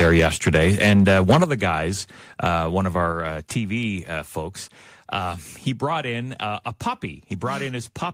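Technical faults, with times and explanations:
0.0–1.44 s, microphone overload: loud syllables sound harsh and crackly, with peaks about 7 dB over the limit, likely from input set too high, flattening their tops.
1.44 s and 3.12 s, microphone volume stepped down: level drops abruptly, about 7 dB before "the guys uh one", then about 4 dB after "guys uh one of", likely software cutting input gain.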